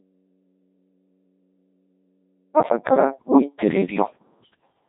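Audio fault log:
0.00–2.56 s, audio dropout to a faint residue: The clip opens with the signal already gone, and for the first 2.56 s only mains hum remains, sitting around 40 dB below the normal speech level. At 2.56 s the speech returns abruptly, with no fade or gradual rise. That hard edge rules out a natural pause. The likely cause is a break in the source feed while the downstream input stayed open, so its hum pickup carried through the gap.
throughout, Codec 2 vocoder: Once the speech is present it has a robotic, buzzy, synthetic character, showing heavy coding damage. Codec 2 does not transmit the waveform. It sends only pitch, voicing decisions, energy and a coarse spectral envelope, and the decoder rebuilds the speech from sine waves. The degree of damage fits a low-rate mode near 2.4 kbit/s, where the envelope is described too coarsely to keep natural timbre.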